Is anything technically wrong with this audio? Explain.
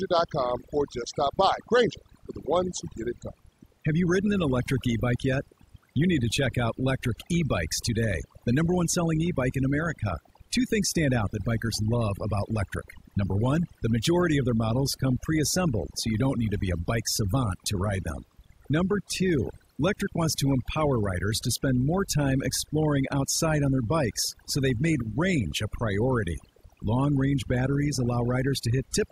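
Yes, there's a problem: overdone noise removal, and it runs the whole way through the speech. Someone pushed a noise reduction tool far too hard on a noisy recording, so any frequency band sitting close to its noise estimate gets pulled way down or shut off, including the softer bits of the voice. The gaps end up almost silent but full of little twinkly specks.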